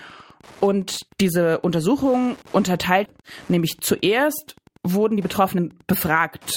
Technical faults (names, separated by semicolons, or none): Wi-Fi interference; skip ahead; jitter buffer speed-up